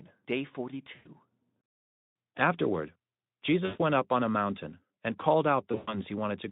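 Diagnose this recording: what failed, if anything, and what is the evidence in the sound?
Network stage: VoIP packet loss concealed by the speech codec. At 0.96–1.09 s, at 3.65–3.81 s before "went up on a", and at 5.71–5.99 s after "a mountain and called", the speech smears into a buzzy tone or coloured noise that fades while the decoder extrapolates across the missing packets.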